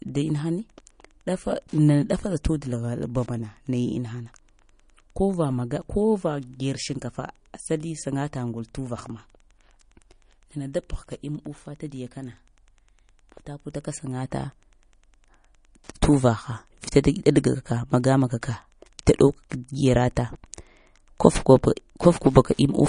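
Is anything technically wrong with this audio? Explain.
Yes, two faults run through the whole clip.

Throughout the 23 seconds, a faint, steady ticking sits under the speech at about ten clicks per second, roughly 40 dB below the speech. This is Wi-Fi interference. A nearby Wi-Fi radio's beacon transmissions are picked up by the audio circuitry and rectified into audible pulses. The spacing of the ticks matches the standard 102.4 ms beacon interval, which identifies the source as the access point's regular announcements.

Also throughout, the speech has no content above 10.1 kHz, which gives it a dull, capped top end, and it carries the smeared, swirly artefacts of heavy MP3 compression. The cause is likely low-bitrate audio saved at a high bitrate: the sound points to an MP3 encoded at around 40 kbit/s and later re-encoded at about 264 kbit/s. The second, generous encode cannot restore the detail and high frequencies that the first one discarded, so the damage stays.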